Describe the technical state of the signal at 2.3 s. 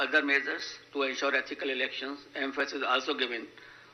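At 2.3 s you're inside a run of clock drift buffer slips from 0.6 to 3.6 s: a regular click about once a second, likely two unsynced clocks dropping or repeating a few dozen samples each time.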